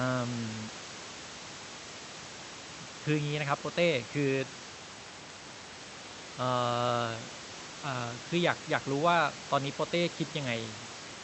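No technical faults are present in this speech clip; the only other sound is room noise sitting about 16 dB below the speech, which belongs to the recording space rather than the signal chain.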